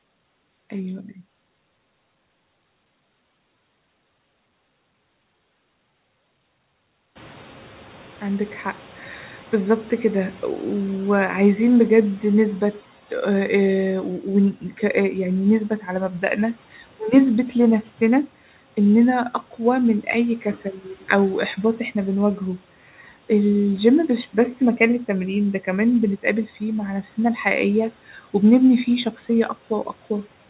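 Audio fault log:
7.15–12.81 s, noise suppressor catching up: the room noise rises by about 22 dB around 7 s and at first comes through with less reduction, because the suppressor's noise estimate lags the new level. Over 5.66 s it adapts and the background sinks by about 9 dB.
14.55–14.8 s and 15.7–15.88 s, speech cut by the noise suppressor: the suppressor mistook parts of the speech for background and turned them down with it, by up to about 10 dB and 9 dB. Short stretches of roughly a tenth of a second each sound swallowed and faint.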